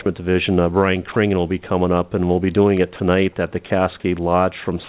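At 1.12 s the sender's voice detector likely misjudged a quiet stretch as background and stopped transmitting. This is sound dropped by the voice detector. For 40 ms, until 1.16 s, the receiver filled the gap with comfort noise, so the audio briefly gives way to a flat, steady hiss before returning. About 20 ms of the original sound is lost in that window, heard as a tiny hole.

At 2.77 s an electrical switching spike cuts in, most likely a nearby switch or static discharge arcing and coupling into the audio line. It lasts only about 3 ms and sits on top of the sound rather than replacing it. It is heard as a sharp snap or a tight cluster of clicks, within the call path's band, which stops at 4 kHz.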